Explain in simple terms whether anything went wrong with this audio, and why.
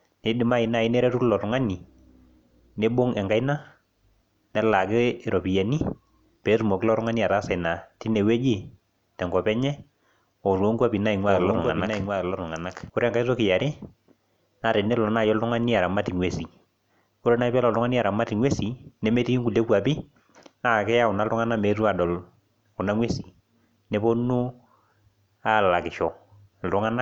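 From 11.28 to 12.90 s the speech plays twice at once. A second, quieter copy trails the original by roughly seven-tenths of a second. This is a doubled audio track, likely from the same sound being captured a second time through a slower route. It differs from an echo or room reverberation because the copy doesn't fade or sound roomy. It stays clear and steady, then switches on and off abruptly.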